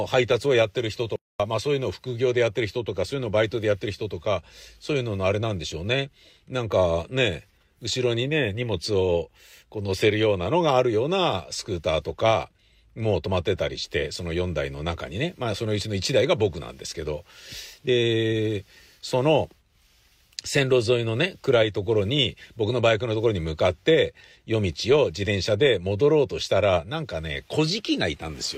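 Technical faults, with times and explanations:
1.16 to 1.40 s, playback stall: the speech cuts out abruptly and the output falls completely silent for about 0.24 s. The silence lands mid-flow, not at a natural pause, so it reads as a hiccup rather than a breath. The likely cause is the player running short of data, or its audio thread being blocked, so nothing reached the output until it caught up.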